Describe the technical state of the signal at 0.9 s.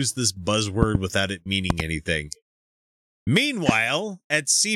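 Two sharp pops land in quick succession between 0.83 and 0.97 s, just before "without it", standing far above the speech while it carries on underneath. This loud pop is likely a sudden voltage pulse, from a switch, plug or static discharge, added to the signal.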